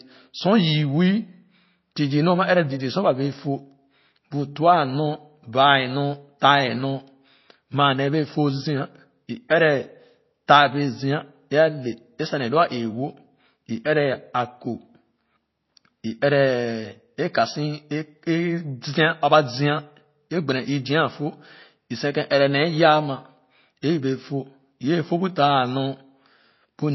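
Speech runs through the whole recording with plainly audible coding damage, most likely from MP3 compression. Nothing is present above 5.8 kHz, so the treble is cut flat at that point. The remaining sound is thin and watery, with a swirling quality. Weak parts of the spectrum drop in and out from one moment to the next. All of this points to a very low bitrate, around 24 kbps. At that rate the encoder cannot afford the high band and discards detail it judges least important. At 9.49 s there is a pre-echo. A short hiss appears just before a sharp attack and lasts about 17 ms. The codec spreads its quantisation noise across a whole block. Noise sized for the loud onset therefore leaks into the quiet moment before it. The attack itself sounds softened and smeared.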